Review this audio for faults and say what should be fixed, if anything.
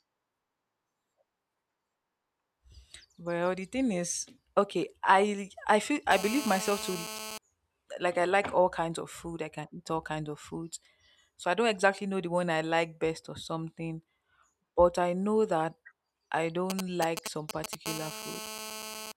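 GSM phone buzz appears twice. The first starts at 6.11 s, just after "okay I I feel", and runs to 7.38 s. It sits about 9 dB below the speech. The second runs from 17.86 to 19.12 s, about 11 dB below the speech. Both are a hard, raspy buzz at 217 Hz, rich in harmonics and unrelated to the speech. A nearby 2G phone in a call is sending radio bursts 217 times a second. The audio circuit rectifies them into this steady tone.

GSM signalling bursts occur from 16.70 to 17.75 s, right after "I know that I". They are a galloping dit-dit-dit of short 217 Hz buzzes, somewhat below the speech in level. A 2G phone nearby is sending brief groups of bursts, not a continuous call stream. The audio circuit rectifies each group into a short buzz. Here they lead straight into the second stretch of steady buzz.

To prevent both, keep mobile phones away from the recording chain or switch them to flight mode, and use shielded, balanced cabling.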